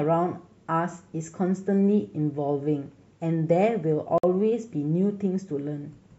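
At 4.18 s the speech drops out into a clean hole that runs to about 4.24 s, a gap between stream segments. Two consecutive segments have timestamps that don't quite line up, leaving roughly 53 ms unaccounted for, so the player fills it with silence. You hear hard edges on both sides, a sudden cut and an abrupt return, but nothing is actually missing. The timing fits six-second segments.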